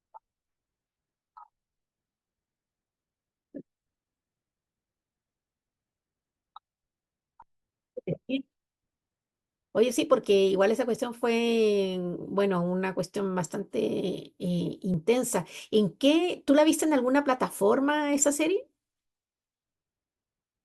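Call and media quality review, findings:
Overlap between stream segments: brief micro-skips at 10.96, 12.95 and 14.94 s in the speech. Spacing of about 2 s matches the segment length, so this points to the segmenter/player join logic. Overlapping timestamps cause the player to trim a few milliseconds of real audio at each boundary, and the waveform jumps. This differs from packet loss because there is no silence, fill or smearing, only a hard discontinuity locked to the segment grid.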